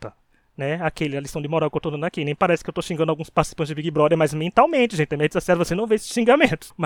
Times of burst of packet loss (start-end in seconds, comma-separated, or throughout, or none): none